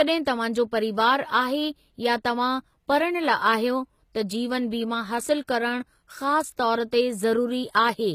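From start to finish, nothing is heard above about 14.9 kHz. The top of the speech is sheared off flat. The cause is likely low-bitrate audio saved at a high bitrate. The sound points to a very low-rate encoding, around 20 kbit/s HE-AAC, later re-encoded as high-rate MP3. The second pass keeps the first codec's damage and cut-off intact. It cannot restore anything.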